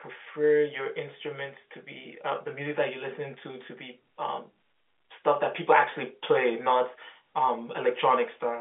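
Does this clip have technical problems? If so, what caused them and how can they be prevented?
No, there's nothing wrong here; it's just ordinary telephone-line audio, with the sound sitting in the narrow phone band and nothing much above about 3.7 kHz, so there's nothing to prevent.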